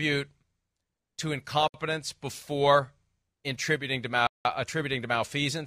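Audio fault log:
1.68–1.74 s and 4.27–4.45 s, Bluetooth stall: speech drops to silence for 61 ms, then 181 ms, before resuming, likely because interference delayed packets and the headphone buffer emptied.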